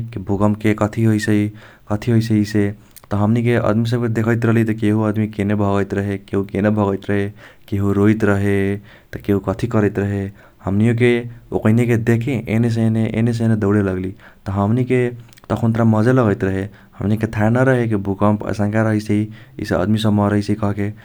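Speech recording with no audible technical faults.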